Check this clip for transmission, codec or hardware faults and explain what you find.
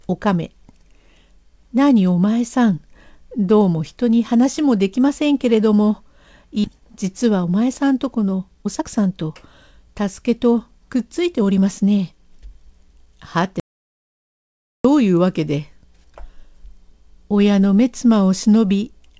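Three faults are audible in this speech, all in the middle of the clip, heard through a call codec whose content stops at 8 kHz, consistent with G.722 at 64 kbps.

Skip ahead, 6.64 to 6.66 s: the jitter buffer discarded roughly a second of queued speech to shed excess delay, with nothing filled in. Playback jumps straight forward, and the speech on either side of the missing second is butted together almost seamlessly.

Jitter buffer speed-up, 6.74 to 9.31 s and 9.71 to 13.07 s: the buffer was still holding too much audio, so the receiver kept trimming short pitch-period slices. The speech runs at 111% speed, then 106%, keeping its pitch but sounding rushed as about 0.3 s and 0.2 s are removed.

Audio dropout to silence, 13.60 to 14.85 s: the speech cuts off and about 1.25 s of silence follows, with no room tone at all, before the sound resumes mid-flow. The likely cause is a lost input, such as a device disconnect, link failure or accidental mute, while silence was still being written.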